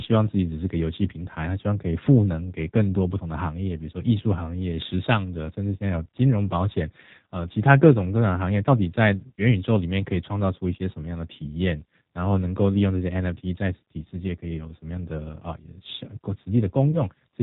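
Throughout the clip the speech carries the sound of the G.729 codec at 8 kbit/s. The decoder rebuilds each 10 ms frame from a vocal tract filter, a pitch predictor and a handful of pulses, so the voice comes across plainly rough and faintly synthetic rather than natural. On a spectrogram the energy stops sharply at 4 kHz, with an empty band above, and the harmonics look smeared and less cleanly defined than in wideband speech.

From about 16.91 to 17.02 s there is VoIP packet loss concealed by the speech codec. About 20 ms of audio went missing, which fits a single lost packet, and the decoder filled the gap by repeating its last pitch and filter settings at falling gain. The result is a brief stretched sound, a buzzy tone or a coloured noise, that dims. Recovery stays weak until about 17.02 s, because each frame builds on the one before. A waveform shows a short stretch shrinking in amplitude.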